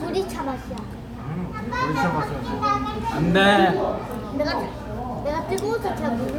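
No technical faults can be heard at any point in the recording.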